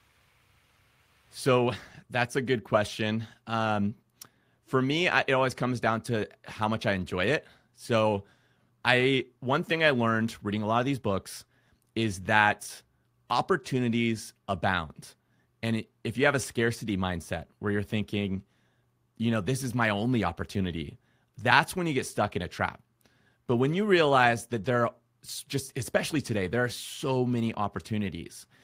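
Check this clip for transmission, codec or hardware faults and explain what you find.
No transmission, codec or hardware faults.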